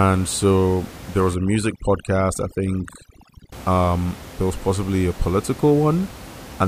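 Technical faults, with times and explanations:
1.35–3.52 s, overdone noise removal: after "so there was", noise reduction set too strong mutes bands near the noise estimate. The background drops and breaks up into twinkling, warbling specks until "um there was possibly".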